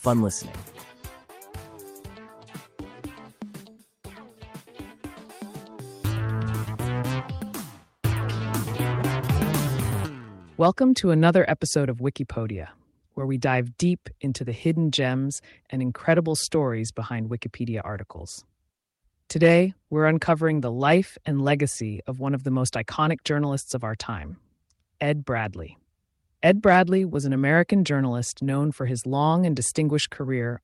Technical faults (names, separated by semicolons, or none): none